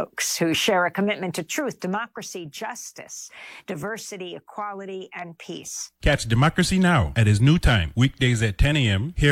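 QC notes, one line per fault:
0.95–2.30 s, zipper noise: after "who share a", the level falls about 10 dB in unsmoothed 2 dB steps, roughly five a second. Each step clicks, causing ticking.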